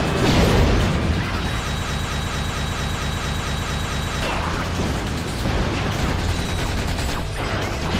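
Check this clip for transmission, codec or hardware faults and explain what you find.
One fault is present, a broken-record loop from 1.82 s to 4.22 s. The likely cause is a player, encoder or stream stall, with the last buffered fragment being resent instead of new data. A 225 ms slice of sound repeats exactly, back to back, eleven times, giving a rapid stuttering rhythm of about four repeats per second. Whatever should have played across those 2.4 seconds never arrives, so the audio resumes at 4.22 s with that stretch missing.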